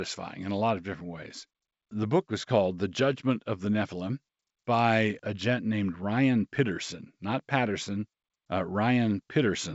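No faults are audible; the speech carries the band-limited character of G.722 wideband telephone coding, with nothing above about 7.7 kHz and only faint coding texture, which fits the codec's full 64 kbit/s mode.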